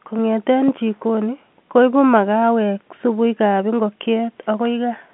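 The clip is speech carried over G.711 telephone coding, and nothing is technically wrong with it.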